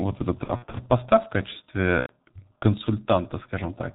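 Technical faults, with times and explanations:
Throughout: G.723.1 codec. Heavy damage consistent with a roughly 6 kbit/s stream: nothing above 4 kHz, and a muffled, hoarse tone with smeared consonants, steady rather than bursty like dropouts.
0.44–0.77 s: VoIP packet loss concealed by the speech codec. Scattered gaps totalling about 150 ms, longest about 60 ms, fitting five lost 30 ms frames. The decoder stretches the last sound into a fading extrapolation, and the sound stays weak until "поста в".
2.00–2.12 s: VoIP packet loss concealed by the speech codec. About 90 ms, which fits three lost frames, is filled with a decaying extrapolation of the last sound. That sets it apart from a clean dropout.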